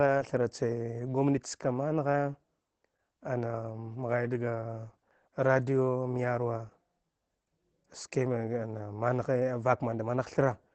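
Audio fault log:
Throughout: Opus voice compression. The SILK coder at what sounds like about 12 kbps leaves speech muffled and hoarse. A spectrogram shows energy cut off near 23.4 kHz, with smeared harmonics.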